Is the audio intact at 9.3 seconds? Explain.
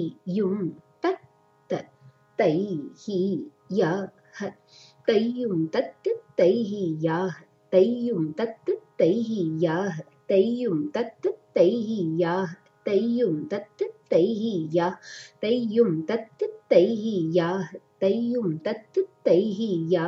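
Yes, the audio is intact at 9.3 seconds, with no dropout, click, distortion or other fault audible at that moment.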